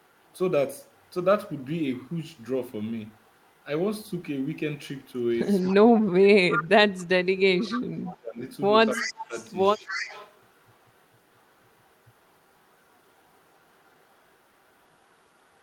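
Echo leak first appears at 5.6 to 5.74 s, a faint delayed copy of the speech about 25 dB below it and trailing by 277 ms. Further leaks follow at 6.51 to 6.67 s (about 10 dB down), 6.98 to 7.04 s (about 35 dB down), 7.7 to 8.08 s, and 8.93 to 10.38 s (both about 15 dB down). The steady 277 ms lag points to the far end's loudspeaker sound likely slipping past its echo canceller and returning as scraps of repeated speech.

Speech suppressed in double talk overlaps the echo at 5.72 to 6.9 s, 7.46 to 8.4 s, and 8.96 to 9.36 s. The talker's level sinks by as much as about 25 dB in the first two spans and about 20 dB in the third, for roughly a second, under a second, and under half a second of affected speech. The likely cause is the canceller failing to tell near speech from echo while both were present and attenuating everything, so the speech dips.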